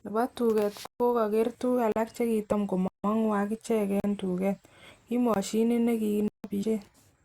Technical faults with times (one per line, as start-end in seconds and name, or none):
0.86-1.00 block of digital silence
1.92-1.96 block of digital silence
2.51 damaged data in a compressed stream
2.88-3.04 block of digital silence
4.00-4.04 block of digital silence
5.34 block of digital silence
6.28-6.44 block of digital silence
6.62 damaged data in a compressed stream